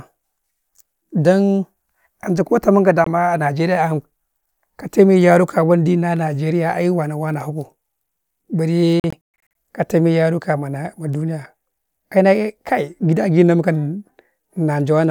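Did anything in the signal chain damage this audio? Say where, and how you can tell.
Yes. Speech breaks into abrupt silences at 3.04–3.07 s and repeatedly between 9.00 and 9.50 s before "ka tame", as if it kept playing unheard: likely a Bluetooth dropout, late wireless packets discarded at playback.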